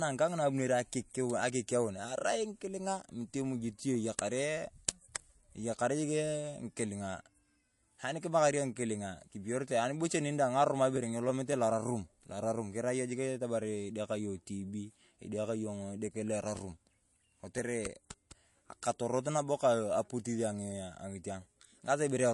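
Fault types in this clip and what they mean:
MP3 compression: nothing comes through above 11.3 kHz for the whole clip, and the speech has a watery, swirly edge with metallic chirps on s sounds. That's likely a low-bitrate MP3 encode, something like 48 kbps, dropping quiet frequency detail that flickers frame to frame.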